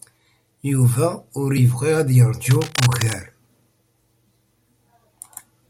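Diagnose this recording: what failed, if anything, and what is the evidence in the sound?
Cable scratch noise runs over the speech from 2.51 to 3.14 s. It is a dense, uneven scratching, about 10 dB below the speech. The stage is analogue wiring. A worn cable or connector was likely moved, so its contact resistance changed rapidly.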